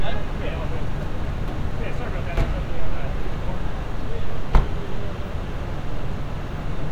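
Nothing here stands out as a technical problem: the sound runs along smoothly the whole way, with no audible glitches, gaps or distortion to point to.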